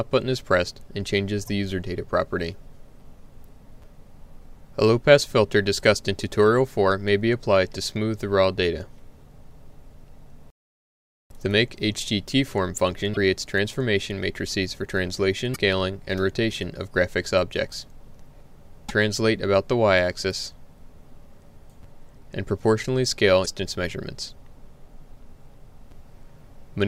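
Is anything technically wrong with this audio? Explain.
Yes. Damaged data in a compressed stream occurs at 1.46–1.49, 13.13–13.17, 15.51–15.56, 18.85–18.91 and 23.42–23.48 s. Corrupted bytes make the decoder misread or discard frames and hunt for the next header, leaving a brief glitch of about 30 to 60 ms in the audio each time.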